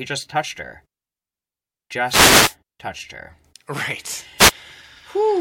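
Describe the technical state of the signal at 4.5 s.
Right at 4.5 s you're inside a wireless microphone noise hit, from 4.38 to 4.52 s: the FM radio link fades, and receiver noise swells into a short burst of static over the speech.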